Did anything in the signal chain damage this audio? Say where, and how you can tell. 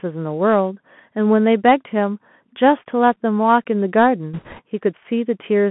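Yes. The damage sits at the codec stage for the whole clip. It is speech passed through a Bluetooth CVSD headset codec, and the sound is confined to roughly 150 Hz to 3.4 kHz, which fits a 64 kbps CVSD link. The codec damage is plainly audible. Sibilants come out scratchy, loud bright sounds break up where the delta modulator's step can't keep pace, and a granular hiss lies under everything. On a spectrogram the energy stops sharply near 3.4 kHz, with a grainy noise floor across the band.

At the network stage, bit errors on the Bluetooth voice link appear from 4.34 to 4.61 s. For that stretch the speech is covered by a rushing, crackly noise rather than sharp clicks. CVSD gives every bit the same small weight and its errors decay, so corruption at a rate of a few percent smears into noise instead of spikes. A spectrogram shows a broadband wash within the passband over those 0.28 s. The waveform looks fuzzier there, with no isolated impulses.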